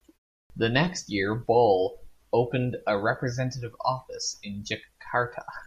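At 0.43 s, after a pause of about 0.33 s, a clipped start after a pause cuts off roughly 70 ms of speech. The playback device has fallen idle in the silence and needs time to wake. The talking therefore bursts in abruptly, missing its onset. Unlike muted pauses, which silence only the gaps and lose no speech, this fault eats into the speech itself.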